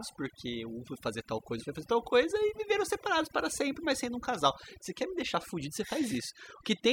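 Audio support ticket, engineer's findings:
Overdone noise removal, whole clip. Noise reduction stage set too aggressive: bands near its noise estimate are cut far down or gated off entirely, so low-level speech components are removed along with the noise. Result: background drops away and breaks into twinkling, warbling specks across the recording, and quieter parts of the speech are lost.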